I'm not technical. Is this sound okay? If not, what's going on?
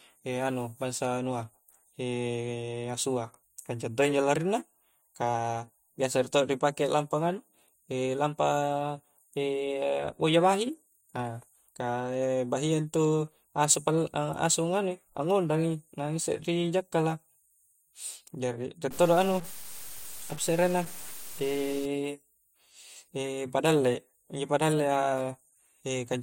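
No. From 18.91 to 21.85 s the speech turns gritty and grainy, and the quietest parts sputter or drop out. This is likely low bit depth without dither, consistent with roughly six bits. Unlike steady hiss, the roughness follows the voice and stops in pauses.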